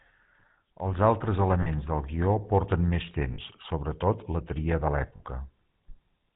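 The speech has a plainly audible buzzy, gravelly roughness throughout, with nothing above 4 kHz. This is the GSM full-rate codec, which fits a 13 kbps stream. It models the vocal tract and drives it with a sparse train of regularly spaced pulses, keeping only one excitation sample in three. That thin excitation gives the voice its grainy buzz, and the narrow band removes all the upper air.

At 1.62 to 1.68 s, just before "del guió porten més", the sound briefly freezes into a rough, metallic ring. The same happens at 3.34 to 3.39 s, between "del guió porten més" and "sobretot la tria de", and again at 5.16 to 5.21 s, just after "sobretot la tria de". Each is a burst of lost GSM frames lasting 40 ms, which points to two 20 ms frames. The decoder filled each gap by repeating the last good frame's settings, which produces the held, ringing smear.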